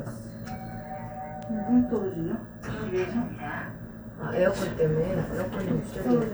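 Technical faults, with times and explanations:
Nothing stood out on listening; no technical problem could be heard anywhere in the sound.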